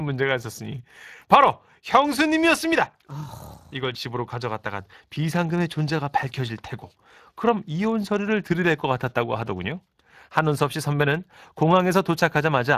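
Speech runs with a rough, hoarse graininess from start to finish, a noisy edge that clings to every syllable. Nothing reaches above 15.2 kHz. These are plainly audible Speex codec artefacts: the CELP coder has too few bits to rebuild the excitation signal that drives its vocal-tract model, so the fine structure is replaced with noise-like approximations. The degree of damage fits a Speex stream running at roughly 22 kbps.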